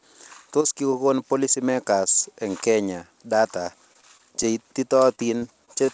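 From 3.64 to 4.45 s, just after "policymakers eng kenya data", the speech turns choppy and robotic: repeated packet loss, with half a dozen short holes of up to 19 ms each patched by stretching the previous sound. It recurs from 5.15 to 5.90 s, denser, with gaps up to 23 ms. On a spectrogram, which stops at 8 kHz from the call codec, these show as brief smeared, repeated slices. The waveform shows small dropouts and copied cycles.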